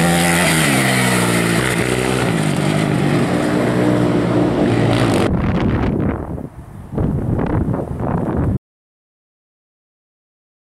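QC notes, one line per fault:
8.57 s to end: audio dropout to silence. The input feed was likely lost at this point, through a disconnected device, a broken link or an unintended mute, while the recorder kept writing silence. The sound stops abruptly mid-flow and never returns, leaving just over 2 s of silence with no room tone or noise floor beneath it, so whatever followed in the last part of the clip is missing entirely.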